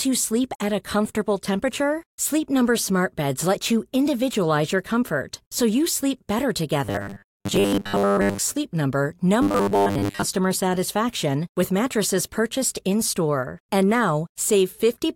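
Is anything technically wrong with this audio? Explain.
Yes. The speech turns robotic twice, from 6.85 to 8.39 s and again from 9.42 to 10.23 s. It sounds like robotic sound from repeated short buffers, likely because fresh audio wasn't arriving fast enough and the playback kept looping its last little chunk to fill the gap. The loops impose a steady 100 Hz buzz, which points to roughly 10 ms buffers. Most of the real audio in those stretches gets skipped, so you hear a rigid metallic drone that only loosely tracks the talking.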